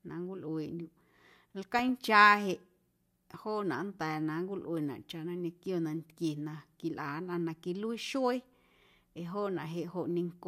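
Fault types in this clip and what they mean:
DAB burbling: weak reception let bit errors slip past error correction, corrupting sub-band samples, so from 1.79 to 1.89 s the speech gets short blips of noise.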